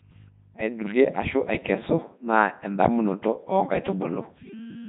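The whole speech clip has gone through a Codec 2 vocoder, likely around 3.2 kbit/s. Resynthesised from pitch and envelope, it's robotic and buzzy, with nothing above 3.8 kHz.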